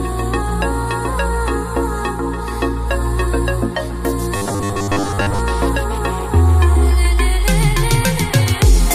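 From 4.37 to 5.39 s the sound turns robotic. The fault is robotic sound from repeated short buffers. A rigid, metallic buzz appears, pitched at 100 Hz. That pitch fits a chunk about 10 ms long being played again and again. The likely cause is fresh audio arriving too seldom, so the software repeats its last short buffer to fill the gap. Most of the real audio in that stretch is skipped. The buzz still loosely tracks the underlying sound.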